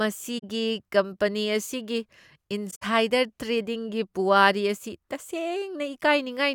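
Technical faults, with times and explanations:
0.38–0.44 s and 2.70–2.83 s, corrupt frame concealed. The first damaged stretch lasts about 56 ms, which fits roughly two damaged AAC frames. The second lasts about 130 ms, which fits around five. The decoder caught the corrupted data and covered those frames itself.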